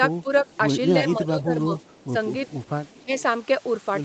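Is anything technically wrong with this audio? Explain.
Yes. There are two kinds of fault in this speech.

Speech suppressed in double talk: at 0.23–0.27 s, 1.0–1.71 s, 2.07–2.14 s and 3.05–3.11 s, the speech dips by about 10 dB. It is likely an echo canceller ducking both talkers at once.

Echo leak: at 1.78–2.04 s, 2.45–2.69 s and 2.88–3.04 s, a faint copy of the speech returns 313 ms late, about 25 to 35 dB down. It is likely loudspeaker pickup that the canceller missed.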